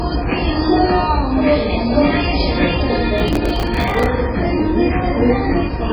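From start to finish the sound is dull and watery, with a swirling, chirpy texture and nothing above about 5.3 kHz. That points to heavy MP3 compression, likely at a very low bitrate around 16 kbps: the encoder cuts the treble and lets weak frequency lines flicker between frames. From 3.18 to 4.06 s a gritty burst of processor overload crackle tears across the sound. The processor repeatedly missed its deadlines for short buffers of a few milliseconds each, around thirty times over that stretch, and each miss replayed a stale fragment with hard edges.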